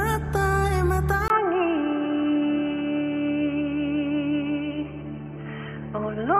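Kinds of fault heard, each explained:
Input switched to a poorer device: at 1.28 s a 20 ms silence, then nothing above 3.1 kHz to the end, so the sound turns dull and boxy at much the same level over a faint new noise floor, likely a changeover to a narrower-band microphone.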